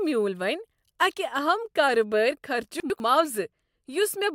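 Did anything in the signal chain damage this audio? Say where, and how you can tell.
Yes. At the buffer stage, chunks out of order appear between 2.8 and 3.0 s, just after "اکہ اہم کاربٲری": a 100 ms block plays one chunk late, behind its successor. Nothing is missing, but the speech jumbles briefly, with three hard joins.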